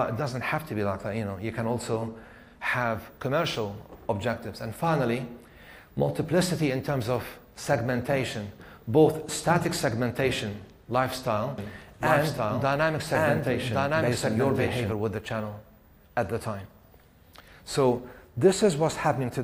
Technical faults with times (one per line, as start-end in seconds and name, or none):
11.58-14.92 doubled audio track